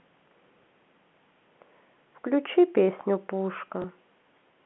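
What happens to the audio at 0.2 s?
Nothing goes wrong at 0.2 s: the speech there comes through intact, carried in the narrow telephone band of G.711 coding with no fault at that moment.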